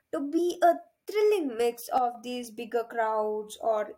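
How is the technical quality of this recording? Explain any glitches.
Two glitches stand out in this speech recording.

At 0.37 s, compressed frames are skipped. A single 23.2 ms frame seems to be lost or rejected by the decoder. About 20 ms of audio goes missing.

From 1.98 s to 2.15 s, the level suddenly falls by about 6 dB, then returns. The likely cause is one channel dropping out. With one channel gone, the mono sum holds only half the shared signal, so the speech briefly sounds quieter.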